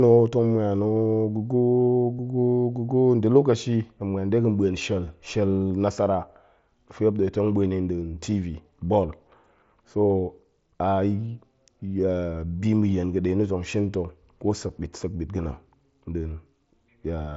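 Concealed Bluetooth headset packet loss hits this speech at 2.18, 5.70 and 14.68 s. The receiver patched lost packets by repeating the best-matching recent waveform, 22.5 ms at the first two and 7.5 ms at the last, leaving the single-frame gap at the last nearly hidden within the 8 kHz mSBC band.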